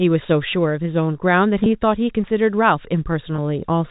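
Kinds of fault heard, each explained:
Packet loss with pitch repetition: at 1.64 and 3.36 s, a 20 ms gap is patched by looping the last pitch cycle, giving a brief buzzy hold.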